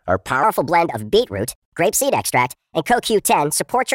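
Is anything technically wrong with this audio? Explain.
Yes. From 0.43 s to the end at 3.95 s, the speech turns high and hurried, running about 1.38 times too fast and about 5.6 semitones sharp. This is a wrong sample rate: the samples are played back faster than they were captured, with no conversion, which fits 32 kHz audio played at 44.1 kHz.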